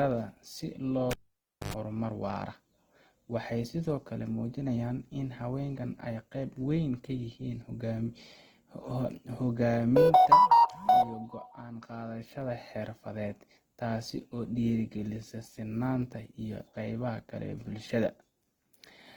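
Throughout the clip the speech has a rough, grainy texture, with tonal parts of the voice breaking into noise rather than swirling or dropping out. That points to likely Opus compression running in its music (CELT) mode at a low bitrate, near 16 kbps, where the encoder preserves each band's energy but fills starved bands with folded or noise content. The bandwidth stays full, reaching about 20.1 kHz, so the damage is graininess, not muffling.

From 1.11 to 1.74 s the cable is pulled and plugged in: the live connection breaks, producing a pop, then near silence for about 0.58 s. As the plug goes back in, the tip touches first and picks up a burst of 50 Hz mains buzz lasting about 0.1 s, before a second pop as full contact returns and the sound resumes on "horumar waara".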